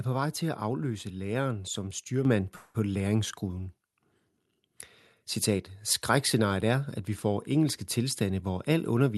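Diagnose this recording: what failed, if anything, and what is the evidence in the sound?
Microphone volume stepped up at 2.25 s, right after "at afløse læreren som". This is a call-processing fault. The speech and the background noise floor both jump by about 6 dB at the same instant, with no ramp. The call software's gain control judged the microphone too quiet and raised the device's input volume in a single step. Because the change happened at the input, everything after it is louder, not just the talker.

Call audio freeze from 2.55 to 2.76 s, at the network and jitter-buffer stage. For about 0.19 s the last sound is stretched into a fading buzz or hiss instead of continuing. There is no silent stretch, and when normal audio resumes nothing is skipped, so the speech simply runs about 0.19 s later than before. The likely cause is packets held up in transit, which let the jitter buffer run dry while the receiver filled the gap.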